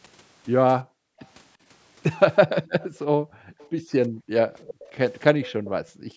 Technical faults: background gated by the echo canceller; echo leak

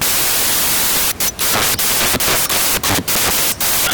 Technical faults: samples built from the wrong bytes

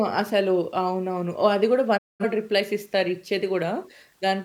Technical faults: digital broadcast dropout

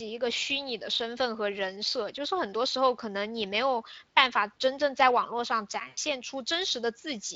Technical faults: VoIP packet loss concealed by the speech codec

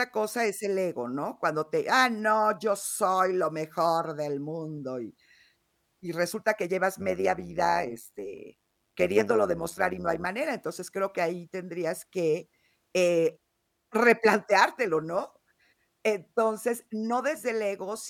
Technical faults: overlap-add ripple

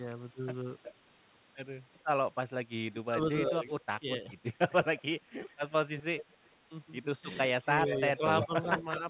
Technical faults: echo leak; speech suppressed in double talk

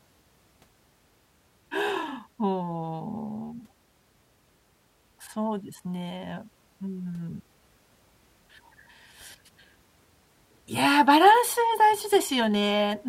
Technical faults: none

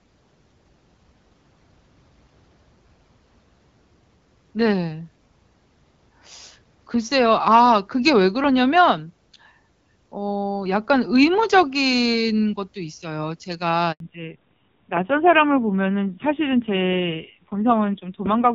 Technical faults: handover gap; fallback to narrowband

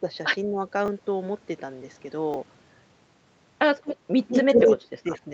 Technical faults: speech suppressed in double talk; repeated buffer; echo leak

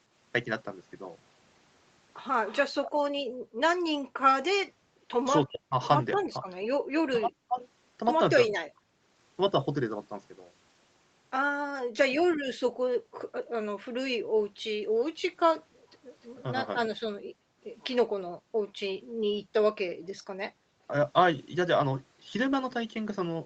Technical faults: echo leak; speech suppressed in double talk; background gated by the echo canceller

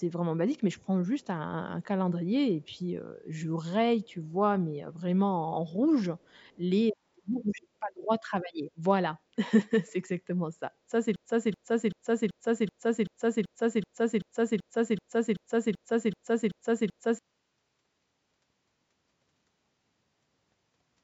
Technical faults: echo leak; broken-record loop

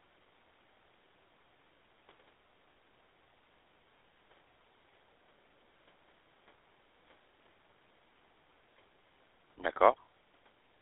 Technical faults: GSM full-rate codec

